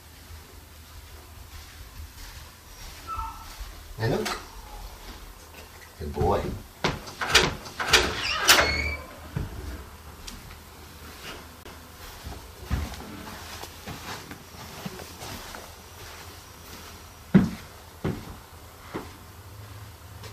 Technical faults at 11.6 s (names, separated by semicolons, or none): CD skip